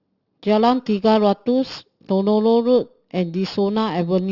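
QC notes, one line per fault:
Throughout: aliasing. The speech was taken down from a 16 kHz rate to 12 kHz without first removing content above the new 6 kHz limit. Energy that sat above 6 kHz folds back around that edge and lands at unrelated lower frequencies. Sibilants come out gritty or metallic instead of crisp. The folded components sit roughly 25 dB below the speech. The spectrum stays full right up to the 6 kHz band edge.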